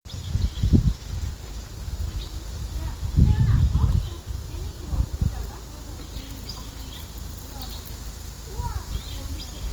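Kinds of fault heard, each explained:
Opus compression: Throughout, the sound is grainy and rough, with tonal parts turning noisy rather than swirling. The bandwidth stays full, with content up to 20.2 kHz. The plainly audible damage is likely Opus in its music mode, at a bitrate near 24 kbps.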